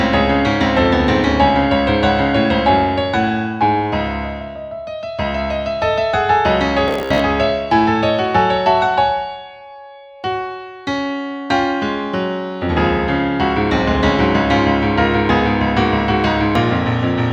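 From 6.88 to 7.21 s the sound turns into a rigid, metallic buzz pitched near 66.7 Hz, the robotic sound from repeated short buffers. The likely cause is audio arriving too seldom, so a 15 ms slice is looped in place, with about half of the passage repeated rather than new material.

At 16.55 s there is a tiny skip from overlap between stream segments. Two segments claim the same moment, and the player trims real audio at the join, so a few milliseconds disappear and the waveform jumps.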